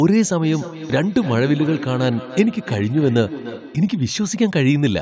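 From 0.43 s to 3.97 s, each bit of the speech comes back a moment later as a thinner, ringing copy, repeating roughly every third of a second and peaking about 13 dB below the speech itself. This is feedback echo between two devices: a second device in the same room plays the call audio aloud, and the first microphone picks it up again. Its echo canceller only removes its own playback, so the loop survives. The call microphone processing limits the audio to 8 kHz.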